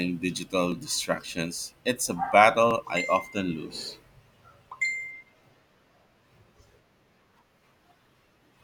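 Audio missing between chunks in this speech recording, at 0.72, 1.71, 2.71 and 3.70 s: tiny skips of a few milliseconds about once per second, likely lost while a recorder switched chunks.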